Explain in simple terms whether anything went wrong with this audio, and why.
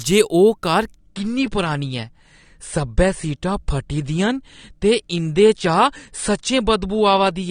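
Something did go wrong, starting at about 0.98 s and lasting to the end of the speech. The stream switched to a lower-quality version of the same recording, a fault known as an adaptive stream at a lower bitrate. It happens when the connection slows and the player trades sound quality for steady playback. The change is abrupt but leaves no gap: the crisp top end disappears, with nothing above about 9.7 kHz, so the speech sounds duller from that point on.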